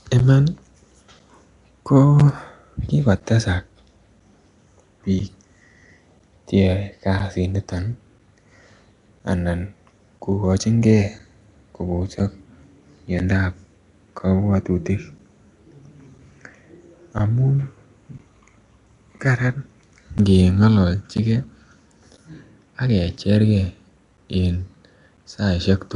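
Throughout the speech there is a hissy, smeared, underwater halo with nothing above 10.6 kHz. This is likely Nellymoser compression, which fills starved bands with noise rather than simply dulling them. From 0.19 s to 25.18 s, periodic USB or driver dropouts silence roughly 10 ms once every 1.0 s, producing clockwork ticks rather than random glitches.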